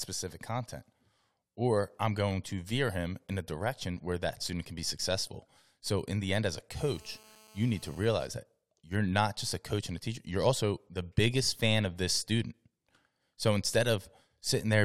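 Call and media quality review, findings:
GSM phone buzz, 6.77 to 8.25 s in the speech. Hard, raspy 217 Hz buzz with dense harmonics, about 27 dB below the speech, steady throughout, consistent with a handset on an active call nearby. Probable component: mic preamp or input stage picking up and rectifying the 2G transmit bursts, turning the RF pulse envelope into audio unrelated to the speech.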